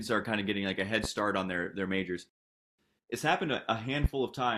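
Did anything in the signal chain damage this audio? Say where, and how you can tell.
Yes. A single sharp pop lands at 1.04 to 1.07 s and again at 4.04 to 4.07 s, each roughly 15 dB above the speech, which carries on underneath. These loud pops likely come from the analogue wiring stage: a voltage step from a plug, switch or static.

At 2.29 s the speech cuts to silence, then resumes exactly where it stopped at 2.79 s. Nothing is missing, but about 0.49 s of dead air is inserted. This rebuffering stall points to playback: the player's buffer emptied and it waited for more data.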